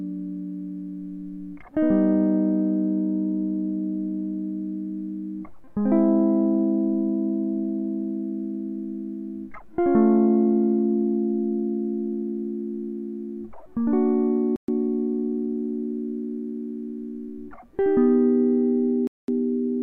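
A music recording with two Bluetooth stalls, where playback drops to dead silence and then carries on: from 14.56 to 14.68 s (about 120 ms) and from 19.07 to 19.28 s (about 210 ms). The likely cause is radio interference delaying packets until the headphones' buffer emptied. On a waveform each gap is a flat line, and on a spectrogram a clean vertical blank band across all frequencies.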